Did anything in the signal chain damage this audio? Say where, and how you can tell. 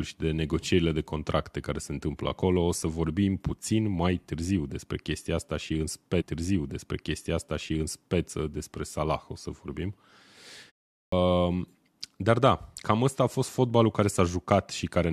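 Yes. Between 6.20 and 8.20 s the stream repeats a segment. About 2.0 s of the programme plays a second time before continuing. That points to the playback or network buffering stage fetching or queuing the same segment twice, so the timeline jumps back and replays it.

At 11.0 s there is a clipped start after a pause. Following a gap of about 0.37 s, the next word begins abruptly, with roughly 123 ms of its onset missing. The output device or driver likely went idle during the pause and had not fully resumed when the sound returned.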